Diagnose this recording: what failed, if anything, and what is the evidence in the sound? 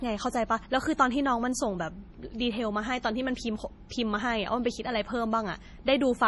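The codec stage likely failed: heavy MP3 compression runs throughout the speech. Nothing survives above 11.5 kHz, which fits a starved 32 kbps encode. Unlike a clean low-pass filter, weak frequency lines flicker between frames, making s sounds swirly and chirpy.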